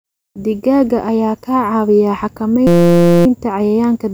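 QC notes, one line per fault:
2.67–3.26 s, system hang loop: the speech freezes into a steady 172 Hz buzz as one 5.8 ms slice repeats, which fits a 256-sample ring buffer cycling while the driver hung. Unlike a dropout, nothing goes silent, and the buzz starts and stops abruptly.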